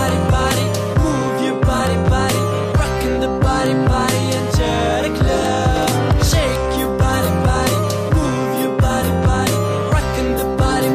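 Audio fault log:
No faults detected in this clip.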